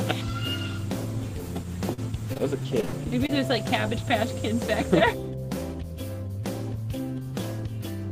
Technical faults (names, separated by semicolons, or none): repeated packet loss (robotic sound)